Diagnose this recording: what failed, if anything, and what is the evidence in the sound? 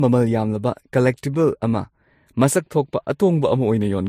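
Transcoding between lossy codecs, throughout the speech: a codec-stage fault. Nothing is present above 16 kHz, and two kinds of coding smear are heard together. This is likely an MP3 near 51 kbit/s re-encoded to Vorbis near 41 kbit/s, with the second encoder spending bits on the first one's artefacts.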